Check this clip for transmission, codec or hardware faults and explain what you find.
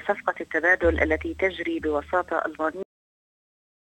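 One fault is present: a cut-off end. At 2.83 s the sound stops abruptly in mid-event and the remaining 1.15 s to the end of the clip is digital silence. The final buffers of audio were never written out or played back, so the stream simply terminates instead of being faded or allowed to finish. The result is an instant drop from active sound to silence, with no natural decay or room tail.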